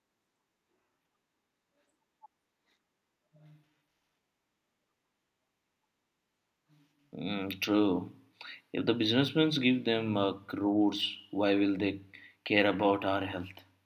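Nothing here calls for comment, just a speech recording with no technical faults to point to anywhere along the way.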